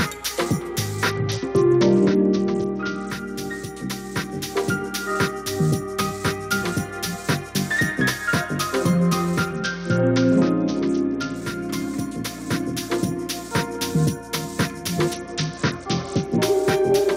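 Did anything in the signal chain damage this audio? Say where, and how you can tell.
Yes: a Bluetooth SBC bit pool drop at the codec stage. From 1.10 to 3.10 s, 9.53 to 11.36 s and 15.13 to 16.43 s, treble dulls and grit rises, fitting a bit pool cut near 72 kbps that starves high sub-bands. A plain low-pass wouldn't add grit.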